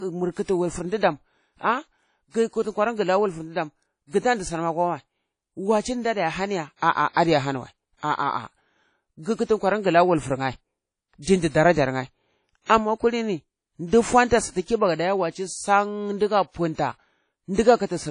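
Throughout the speech, a ringing, washy hiss breathes with the signal, and nothing sounds above 10.1 kHz. This is likely WMA compression at a low bitrate, around 32 kbps. Pre-echo comes at 0.43 to 0.48 s and 12.65 to 12.70 s. Codec noise spreads about 57 ms and 45 ms before the attacks, which arrive softened.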